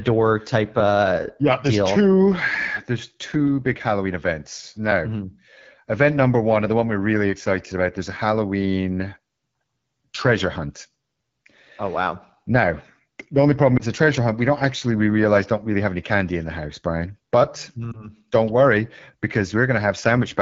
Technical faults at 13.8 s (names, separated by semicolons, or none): AMR wideband (HD Voice) codec; lost AMR speech frames